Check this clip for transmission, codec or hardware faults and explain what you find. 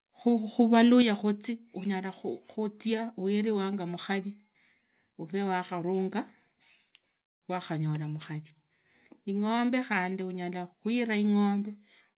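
Two hardware-side faults are audible, both tied to the microphone's input level. The band stops at 4 kHz throughout, which fits a G.711 mu-law call path.

From 0.6 to 1.02 s there is microphone overload. The loudest peaks sound flattened and crackly. The signal seems to exceed the converter's ceiling by about 2 dB. Only a small fraction of samples are affected, but their tops are sliced off. That squaring of the waveform adds a harsh, gritty edge. The likely cause is an input volume set too high.

At 1.02 s the microphone volume steps down by about 5 dB. Voice and background drop together, all at once. It comes right after the overloaded stretch. That fits call software detecting the clipping and cutting the device's input gain in one move. A second, smaller step of about 2 dB follows at 11.76 s. It is again sudden, and it lowers everything evenly.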